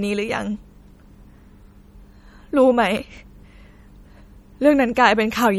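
From start to finish the speech sounds watery and swirly, with metallic chirps on s sounds, smeared attacks and dull treble. That points to likely MP3 compression at a low rate, around 48 kbps: starved of bits, the encoder cuts the highs and drops weak frequency lines frame by frame.

Between 2.97 and 4.37 s come eight regular CD scratch ticks, roughly six a second, of uneven strength, the longest about 2 milliseconds. A blemish spoils more data than error correction can repair on each disc turn, so the player patches or mutes those samples.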